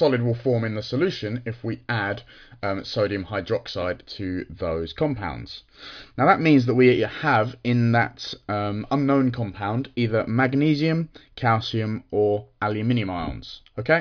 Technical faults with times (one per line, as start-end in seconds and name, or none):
none